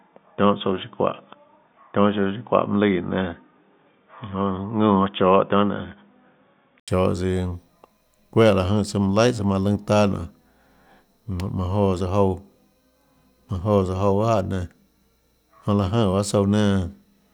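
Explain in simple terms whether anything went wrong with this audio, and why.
Until 6.88 seconds the sound is dull and boxy, missing everything above 3.6 kHz. After an 80 ms gap it clears. The input likely switched to a poorer device.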